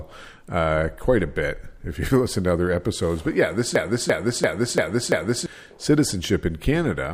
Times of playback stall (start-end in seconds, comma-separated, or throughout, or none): none